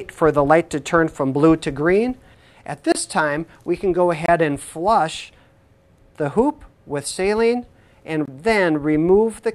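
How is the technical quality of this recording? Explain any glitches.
The recording has three brief dropouts to digital silence. At 2.92, 4.26 and 8.26 s, blocks of digital silence (about 28, 26 and 23 ms) cut in abruptly, like an unfilled output buffer. The last fits a 1024-sample buffer. Each gives a tiny hole.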